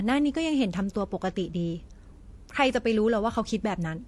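Throughout the speech, differing coding artefacts heard together point to transcoding between lossy codecs, likely MP3 then HE-AAC. Stacked, differing artefacts distinguish it from a single codec, with nothing above 18.3 kHz.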